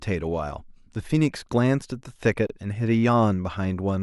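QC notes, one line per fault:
2.47 to 2.50 s, gap at a join of encoded pieces: the speech drops out for about 28 ms, then resumes where it left off. Two separately encoded pieces meet here untrimmed. Encoder start delay and end padding leave silence, with smeared edges.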